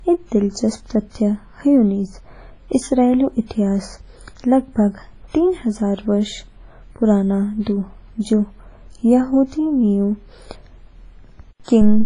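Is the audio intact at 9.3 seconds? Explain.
No. At 9.3 seconds the speech carries heavy coding damage that runs through the whole clip. Nothing is left above about 10.1 kHz. The sound rings and smears, with a washy hiss that swells and fades with the speech. This is likely WMA compression at a low bitrate, around 24 kbps. Its long transform blocks spread quantisation noise over tens of milliseconds, and weak spectral lines are zeroed out.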